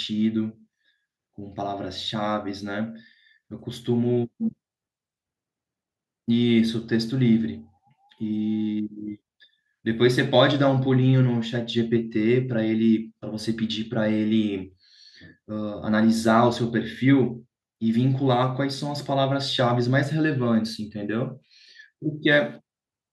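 Nothing technically wrong turns up anywhere in this bit of speech, so there's no fault to point to and no time or cause to give.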